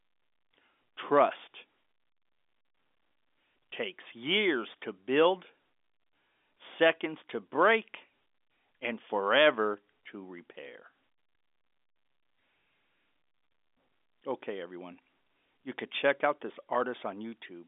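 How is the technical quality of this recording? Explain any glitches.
No audible glitches or faults.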